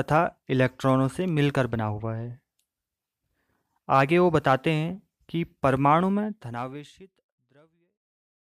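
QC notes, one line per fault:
No faults to note for this speech clip; the fade-out at the end, beginning around 6 seconds, is a smooth editorial fade.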